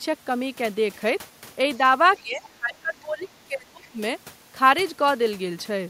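A faint second voice slips in from 2.17 to 2.21 s, roughly 30 dB under the main speech, and returns from 2.43 to 2.50 s and again from 3.82 to 3.88 s, even lower, around 35 dB down. These brief scraps are the other side's voice leaking through. The far end is likely playing from the talker's loudspeaker, and the echo canceller left a residue of it in the microphone signal.

Between those scraps the main speech drops away. From 2.22 to 2.42 s it sinks by about 15 dB. From 2.59 to 3.99 s it dips harder, up to about 25 dB, in pieces adding up to roughly a second. This is speech suppressed in double talk. With both sides talking at once, the canceller likely could not tell the near talker from the echo and turned both down together.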